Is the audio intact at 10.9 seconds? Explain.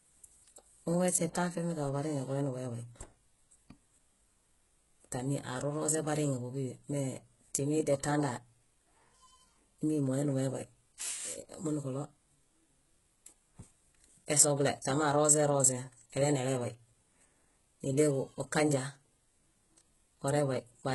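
No. At 10.9 seconds, as throughout the clip, the speech shows heavy damage from what is likely HE-AAC compression at a very low bitrate, around 12 kbps. Nothing reaches above 11.5 kHz, and the treble is rebuilt by copying lower bands upward, so s sounds come across gritty and metallic.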